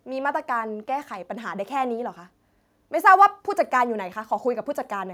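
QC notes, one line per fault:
Nothing to flag here, as no faults turn up anywhere in the speech.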